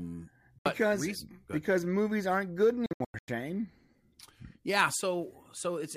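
At 0.59 to 0.66 s the speech cuts to silence for about 70 ms, just before "because reason because movies". From 2.86 to 3.28 s, after "because movies aren't good", gaps scatter, the longest about 93 ms. Speech resumes as if it had played on. This is likely Bluetooth dropout: late packets were discarded.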